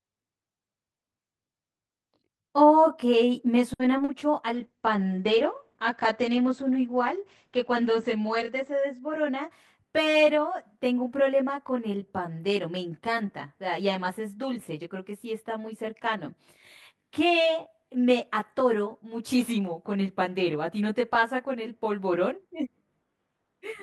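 Speech runs through the whole clip with a rough, slightly doubled colour from channel delay (comb filtering). One channel lags the other by about 20 ms, and when the two are summed to mono the shared content cancels at evenly spaced frequencies, starting around 30 Hz and repeating densely up the spectrum. Because the notches stay fixed for the full length rather than sweeping, this is a static delay, not a flanger or a moving phase problem. At 3.73 to 3.81 s there is a short stall from a late packet: a sound is held for about 60 ms and then the audio resumes exactly where it left off. Nothing is lost, but everything after it sits about 60 ms later. That stretched hold with nothing missing is what separates it from the two short concealed packet losses just after, at 3.97 to 4.00 s and 4.04 to 4.10 s. In those, 20 ms and then 40 ms of real audio never arrived, and the gaps were patched by extrapolating the preceding sound before blending back. 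The result is a brief smear or wobble where some material is simply gone, not delayed. From 4.55 to 9.81 s a call bitrate drop takes the encoder from 32 to 12 kbps, holding at the lowest rate for about 4 s. The audio bandwidth shrinks from 20 kHz to 8 kHz, so the sound turns muffled and somewhat watery, with coarser coding throughout. A continuous loss of top end and texture over several seconds marks this as a bitrate change rather than the momentary damage of packet loss. Overlapping its end, from 8.98 to 10.38 s, a jitter buffer speed-up plays the audio at about 104% of normal speed, trimming roughly 70 ms of accumulated delay by dropping small pitch-period pieces many times over. Pitch stays the same, so it runs a little faster rather than sounding raised. Its gradual, spread-out timing is what tells it apart from a single dropout or a resampling error.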